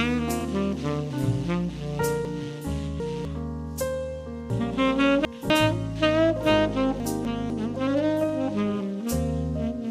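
At 0.40 to 0.42 s there are repeated frames: a single compressed frame of about 23.2 ms is played twice. It sounds like a tiny stutter, and it adds 23.2 ms to the audio. On a waveform the same short block of cycles appears twice in a row.

Chunks out of order follow at 2.25 to 3.25 s, 4.5 to 5.5 s and 7.0 to 7.5 s. In each span a 250 ms chunk arrived late and plays after the chunks that should come after it. In the first two spans it is three chunks late, and in the third it is one chunk late. Each span sounds jumbled and has three hard joins. On a spectrogram the content changes abruptly at the joins between chunks. The waveform shows sudden discontinuities at the joins.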